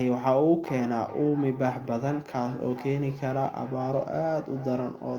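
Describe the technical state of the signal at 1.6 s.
At 1.6 s, feedback echo between two devices is under way, running from 0.67 s to the end. A second device's loudspeaker feeds this microphone, and no canceller removes it, so the speech returns roughly every 400 ms, thinning and ringing, peaking at about 16 dB below the speech.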